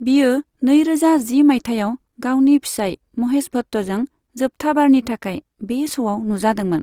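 Throughout the speech, tones sound grainy and rough, likely from Opus compression, which fits a low bitrate near 24 kbps. Bit-starved bands get refilled with noise.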